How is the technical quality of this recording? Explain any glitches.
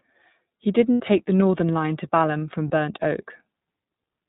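The quality is limited. The speech passes through the iLBC codec, and two short dropouts interrupt it.

The iLBC codec is active throughout. Nothing above 4 kHz survives, and the speech sounds plainly rough and synthetic. This fits the 15.2 kbps mode with 20 ms frames.

Lost iLBC frames occur from 0.93 to 1.01 s. That 80 ms gap fits four missing frames. The decoder repeats the last pitch cycle with noise, so it sounds like a held, buzzy vowel.

A second brief loss occurs from 2.68 to 2.71 s. It fits a single lost frame and gives a short buzzy hold. Because each iLBC frame is coded on its own, clean speech returns immediately.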